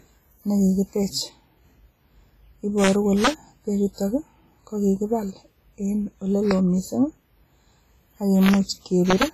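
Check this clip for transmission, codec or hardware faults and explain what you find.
Two faults are present: codec damage across the whole clip, and five integer overflow cracks.

WMA compression runs throughout. The speech sounds ringing and washy, with hiss that breathes along with it, and nothing above 15.2 kHz. The damage is heavy. It likely comes from a transform codec like WMA at a low bitrate, around 24 kbps, spreading quantisation noise across long blocks.

Integer overflow occurs at 2.83–2.89 s, 3.24–3.28 s, 6.51 s just after "kokibaal en", 8.43–8.54 s and 9.10–9.23 s. Peaks exceeded the integer limit by about 0 to 2 dB and wrapped to the opposite sign. Each is heard as a crack, sharper than clipping.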